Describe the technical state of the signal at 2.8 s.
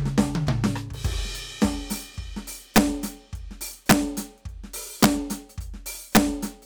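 At 2.76 s the music hits integer overflow. A peak runs about 3 dB past the largest value the integer format can hold. Instead of being limited, it wraps around to the opposite extreme. The result is a violent crack, far sharper than ordinary clipping.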